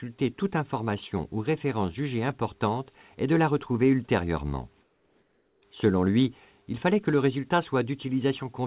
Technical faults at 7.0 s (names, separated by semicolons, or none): none